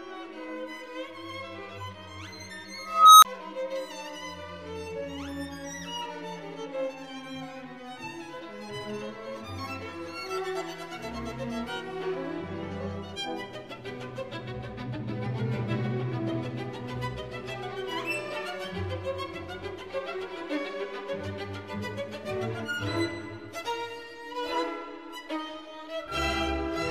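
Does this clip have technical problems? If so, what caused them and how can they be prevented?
Yes. An unstable filter fault runs from 2.79 to 3.25 s. A recursive filter with bad coefficients feeds on its own output, so a tone around 1.5 kHz swells over 0.44 s, clips, overflows, then drops to 25 ms of silence before resetting. Validating coefficients so every pole stays inside the unit circle prevents it.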